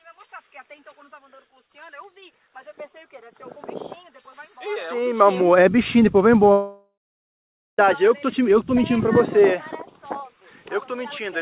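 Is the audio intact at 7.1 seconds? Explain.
No. From 6.52 to 7.79 s there's what sounds like a long network dropout, likely. The last sound is stretched into a fading buzz for a few tenths of a second, then about 0.84 s of silence, so 7.1 s falls in that gap.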